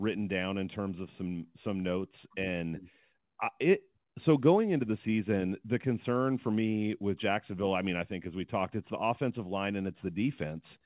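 The speech carries no technical faults; it comes over a normally working WebRTC call path with narrowband telephone-style coding, so nothing is heard above 4 kHz.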